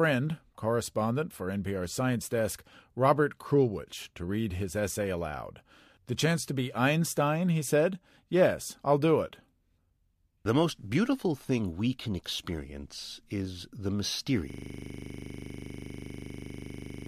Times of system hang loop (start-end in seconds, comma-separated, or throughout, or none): 14.50-17.08